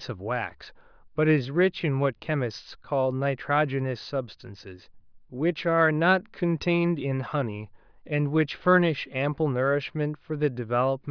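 Nothing stood out as a technical fault on listening to the speech.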